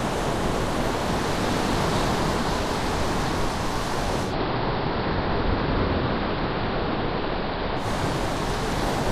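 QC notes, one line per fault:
4.22–7.89 s, digital radio blending to analogue: the receiver loses the digital stream and cross-fades over 137 ms to the AM broadcast, so level drops about 1 dB, and faint hiss appears well below the sound.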